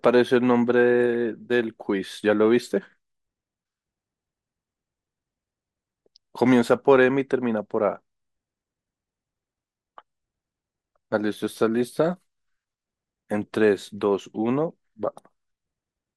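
Throughout, the speech is dull and granular, with upper bands dropping in and out, plainly audible MP2 compression, likely from coding at a low rate, which fits around 80 kbps. At 1.14 s a brief DAB burbling blip appears: a small fraction of bit errors corrupted one frame, putting short blips of noise in single sub-bands.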